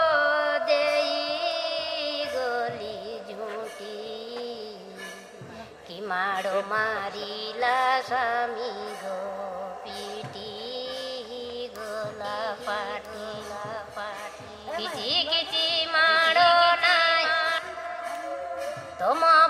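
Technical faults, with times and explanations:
12.25–17.59 s: doubled audio track. A full-band copy of the sound runs about one and a half seconds behind, about 5 dB quieter. It has no decay or room colour. It starts and stops abruptly. A slower second capture path is the likely cause.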